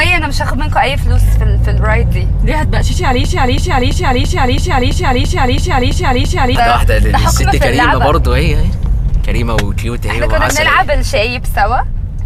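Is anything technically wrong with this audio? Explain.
Yes, there's a broken-record loop from 3.24 to 6.55 s. A fragment of about 0.33 s repeats ten times, back to back and identical each pass. Likely the player or stream stalled and kept resending its last buffered chunk, so whatever should have played there is gone.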